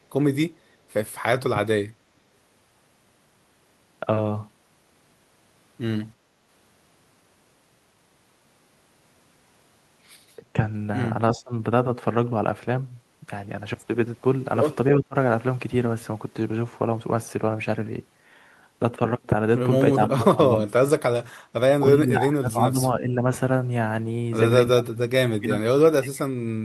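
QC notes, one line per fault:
6.18 to 6.29 s, background gated by the echo canceller: the room tone dips by about 6 dB for roughly a tenth of a second, then returns. The canceller clamped the microphone while the loudspeaker played. Only the background ducks, which sets it apart from speech suppression.
10.37 to 10.57 s, 11.31 to 11.52 s, 15.0 to 15.16 s, 19.93 to 20.86 s, 22.02 to 23.14 s, 24.73 to 25.02 s and 25.32 to 26.32 s, speech suppressed in double talk: the talker's own voice sinks or chops out. The drops run from a slight dip to around 30 dB and last from a fraction of a second to about a second. This is likely the canceller mistaking near-end speech for echo while both sides talk.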